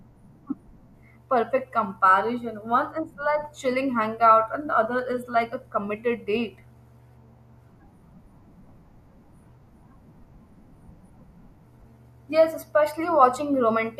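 Nothing technical goes wrong anywhere in this stretch of speech, so there's no fault to point to.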